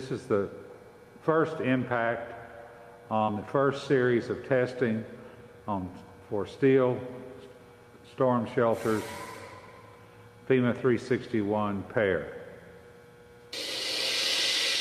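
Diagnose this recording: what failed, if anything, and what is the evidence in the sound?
Network side, jitter buffer first. There's a short stall from a late packet between 3.17 and 3.33 s: the buffer ran dry, so the receiver held the last bit of sound for about 37 ms until the packet showed up, then carried on from the same spot.

Tangled up in that same stretch is a burst of packet loss, 3.23 to 3.30 s. About 40 ms just never arrived in time, so the receiver smeared the previous sound across roughly 46 ms, letting it fade, then jumped ahead past the missing chunk.

Then a jitter buffer speed-up from 8.52 to 9.33 s. The buffer had backed up, so it trimmed tiny pitch-period slices again and again to catch up, dropping something like 50 ms. That stretch plays about 5% fast with the pitch unchanged, slightly rushed.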